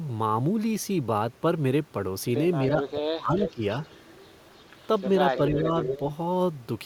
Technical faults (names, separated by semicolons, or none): speech suppressed in double talk; echo leak